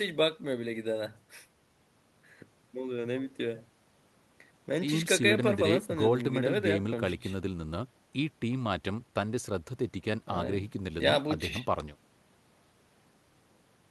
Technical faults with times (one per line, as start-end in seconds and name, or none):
none